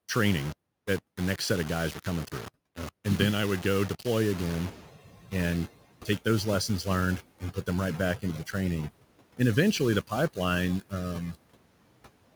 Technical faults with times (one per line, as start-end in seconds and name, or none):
0.00-12.36 low bit depth without dither
0.00-12.36 noise suppressor artifacts
4.37-4.85 noise suppressor catching up